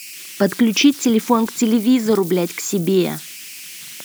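Converter idle tones run through the whole speech clip: an undithered delta-sigma converter settles into repeating bit patterns on small input, giving a whistle around 3 kHz in pauses and graininess under quiet passages, about 20 dB below the speech, unlike fixed electrical whine.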